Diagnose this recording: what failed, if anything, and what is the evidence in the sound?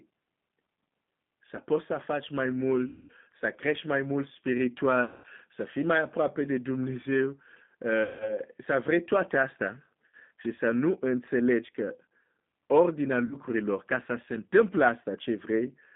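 The codec stage is G.729 at 8 kbit/s: the whole clip sits in a 150 Hz to 3.6 kHz band, with that rough, synthetic, pulse-built speech texture.

Network stage: VoIP packet loss concealed by the speech codec at 2.87–3.12, 5.04–5.26, 8.03–8.39, 10.06–10.14 and 13.25–13.35 s. The decoder extends the last pitch and filter into a fading buzzy tone or coloured noise, and the speech stays weak briefly afterwards.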